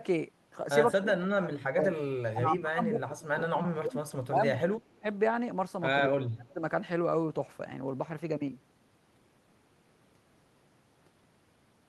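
Speech suppressed in double talk appears from 0.99 to 4.04 s, 4.27 to 5.05 s and 6.06 to 6.62 s, where the speech drops by as much as roughly 30 dB. The likely cause is an echo canceller muting the near talker during overlapping far-end speech.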